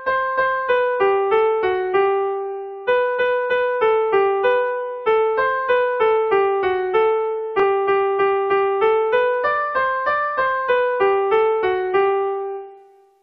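At 7.60 to 7.63 s the audio has a brief Bluetooth stutter: a slice about 23 ms long plays twice and the sound then carries on further along. That fits one late or lost wireless packet covered by replaying the last buffer. Unlike a dropout, there is no silent gap.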